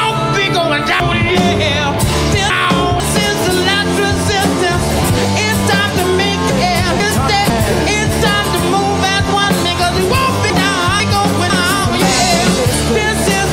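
Chunks out of order at 1.0–3.0 s, 6.5–7.5 s and 10.5–11.5 s: a 0.5 s chunk plays three, then one, chunks late, jumbling the sound.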